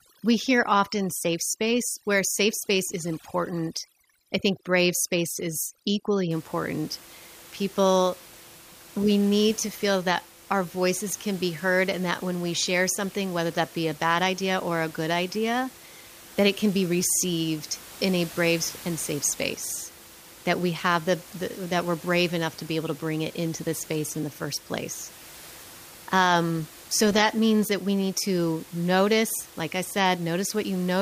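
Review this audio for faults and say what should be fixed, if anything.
From 0.00 to 6.31 s, overdone noise removal switches bands off near the noise estimate; the spectrogram shows blank gaps with isolated twinkling specks. Use a gentler reduction setting, with less attenuation and spectral smoothing, so the room noise (about 21 dB below the speech) stays intact.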